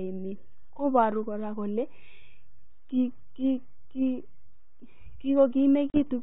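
From 5.90 to 6.20 s the speech shows packet loss on an ADPCM call: about 40 ms, roughly two packets, drops to hard-edged silence. The 32 kbit/s G.726 decoder's predictor and step size lose sync with the sender, so the speech resumes slightly distorted before settling.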